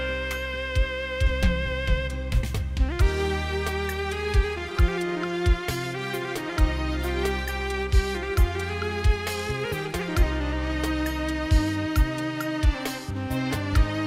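No technical faults can be heard anywhere in the audio, and the signal stays stable and continuous throughout.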